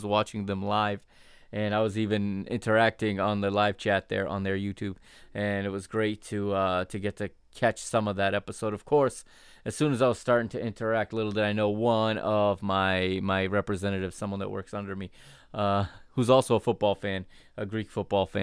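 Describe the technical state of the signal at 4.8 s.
At 4.8 s the speech signal is intact, with no audible technical fault at that moment.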